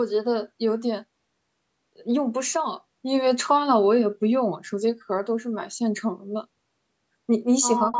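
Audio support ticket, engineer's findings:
Speech suppressed in double talk, 7.86 to 7.94 s: echo canceller likely unable to separate near talker from loudspeaker echo while both sides spoke, so it attenuated everything. Speech level dips by roughly 10 dB for about 70 ms, audible as a brief duck.

Echo leak, 7.93 to 7.99 s: far end likely on loudspeaker, its echo canceller passing residual mic pickup back down the line. A copy of the speech returns 185 ms late, only about 5 dB below the original, clipped short by the end of the clip; the call's low-pass above 8 kHz shapes it.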